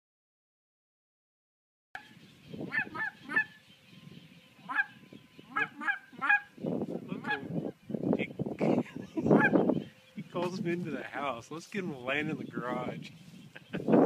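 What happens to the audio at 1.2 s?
Cut-off start: at 1.2 s there is only digital silence, which runs from 0.0 to 1.95 s. Capture began late, so at 1.95 s the audio enters abruptly partway through a sound, with no natural attack or fade-in leading into it.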